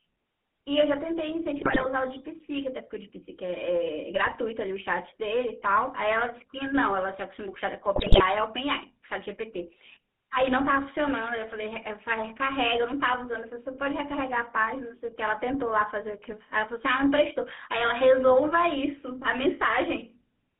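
Throughout the 21-second speech clip, the GSM full-rate codec colours every syllable. The band runs only from about 150 Hz to 3.6 kHz, and inside it the voice carries a buzzy, gravelly grain, which fits a 13 kbps full-rate stream. The codec rebuilds speech from a vocal-tract filter fed by a sparse pulse excitation. That rasp inside the band separates it from a plain band-limited telephone line, which sounds muffled but stays smooth.

GSM bit errors then strike three times: 1.58 to 1.87 s, 4.15 to 4.36 s, and 7.96 to 8.21 s. Corrupted filter, pitch and gain values reach the decoder, so the spectrum warps and the level jumps frame after frame while each burst lasts. The speech breaks into squawks, pops and gargling. The burst near 8 s sounds the most mangled and the one near 4.2 s the mildest. Packet loss would leave gaps or smeared repeats instead.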